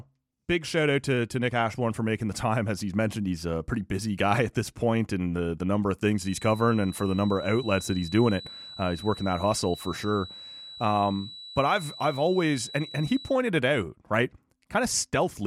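Speech, with a feedback whistle from 6.13 s to 13.42 s: a thin 3.9 kHz tone at one pitch, slowly swelling and fading about 20 dB below the voice, likely from a loudspeaker-to-microphone loop held just short of runaway. On a spectrogram it appears as one narrow horizontal line across that span.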